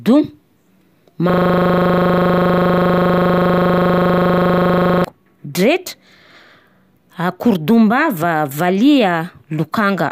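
From 1.30 s to 5.04 s the speech freezes into a system hang loop. The driver or host stopped supplying new audio while the hardware kept replaying the same 40 ms section of its ring buffer, so one tiny slice repeats exactly at 25 Hz. It sounds like a harsh, buzzy stutter. Packet-loss concealment repeats fade or smear, but this loop stays perfectly identical and rigidly periodic until normal playback snaps back.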